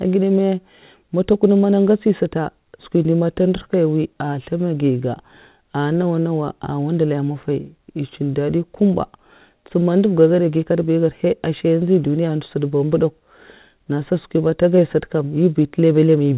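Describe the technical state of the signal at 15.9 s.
At 15.9 s the signal is intact, with the speech carried cleanly through the call path and its G.711-style narrowband coding leaving nothing above about 4 kHz.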